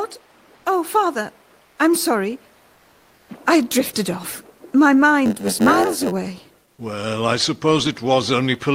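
Comfort noise in place of the background runs from 2.77 to 3.25 s: for about 480 ms the real background, sitting about 37 dB below the loudest passages, gives way to a flat, featureless hiss about 5 dB quieter. The likely cause is discontinuous transmission, with the receiver synthesising filler noise during the pause.

A block size mismatch (padded) follows from 5.25 to 6.13 s. Each block arrives short and is topped up with zeros, so a tiny gap recurs and produces a buzz at about 91.9 Hz, while the audio plays at 0.919 times normal speed with its timbre intact.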